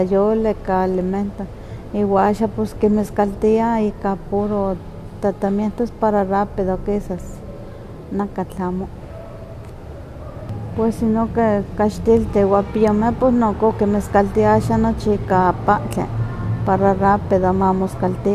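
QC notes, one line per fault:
No fault found.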